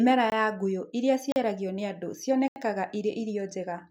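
At 0.30 s, 1.32 s and 2.48 s the speech drops into a block of digital silence, lasting 20, 40 and 80 ms. Samples were replaced by zeros. Each cut and return is abrupt. The last sounds like a short hole.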